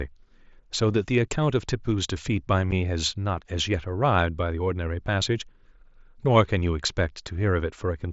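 A speech recording with one short dropout at 2.71 s, caused by unconcealed Bluetooth headset packet loss. A hole of about 7.5 ms opens in the speech, which fits a single lost headset packet. Nothing fills the gap. The audio simply stops and restarts with hard edges. The link runs the mSBC headset codec, so the speech stays wideband up to 8 kHz, with light graininess on louder sounds.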